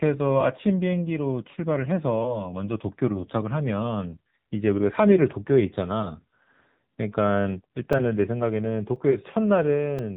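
The speech sounds buzzy, thin and synthetic throughout, with nothing above 3.8 kHz. This is heavy AMR narrowband mobile codec damage, consistent with a low bitrate around 6.7 kbps. From 7.93 to 9.99 s, a few short ticks land every 1.024 s, each a brief gap of a few milliseconds. These are periodic USB or driver dropouts, where the audio is lost and replaced by silence.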